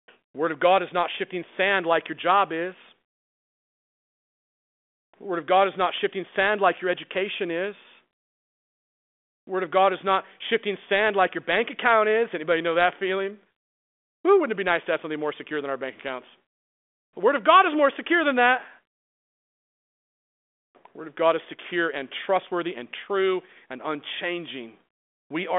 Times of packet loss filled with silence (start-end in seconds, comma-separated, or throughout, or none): none